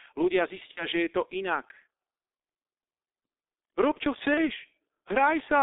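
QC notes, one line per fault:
Throughout: G.723.1 codec. The audio is confined to a telephone band of roughly 300 Hz to 3.7 kHz, so it lacks low body and top-end air. Heavy coding damage gives a muffled, hoarse quality with smeared consonants. The coarse 30 ms frame structure and a slowly updated vocal-tract model are what blur transitions. The bandwidth and texture fit the 6.3 kbit/s mode of this early internet-telephony codec.
0.71–0.86 s and 4.34–4.50 s: VoIP packet loss concealed by the speech codec. About 60 ms of coded audio is missing in the first gap and about 30 ms in the second. The decoder fills each hole by repeating its last pitch and filter state at decreasing gain, so the sound stretches into a buzzy tone or coloured noise that fades. Because each frame is predicted from the previous one, the speech stays weak and distorted briefly after real data resumes, which makes each event last longer than the actual gap.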